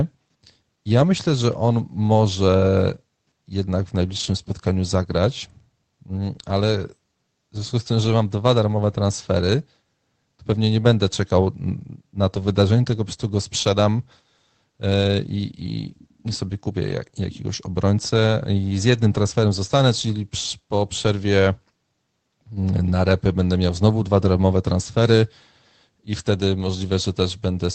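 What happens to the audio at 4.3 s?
From 4.11 to 4.29 s, between "on może jednak w" and "spotkaniu zagrać mm ale", lost packets were rebuilt from error correction. Low-bitrate backup copies fill the gap, so the sound turns briefly rougher and noisier.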